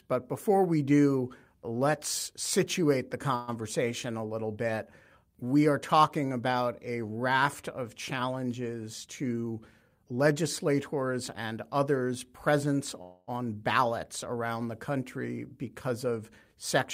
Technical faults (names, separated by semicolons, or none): call audio freeze; jitter buffer speed-up